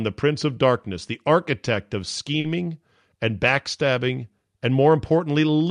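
A short stall from a late packet hits this speech clip at 2.40 to 2.45 s, just after "the architect of". The jitter buffer ran dry, so the receiver held the last sound for about 40 ms until the packet arrived, then resumed with nothing lost, leaving a slightly stretched moment with a slight buzz or dip. The call codec path, which sounds like Opus at 64 kbps, limits the audio bandwidth to about 12 kHz.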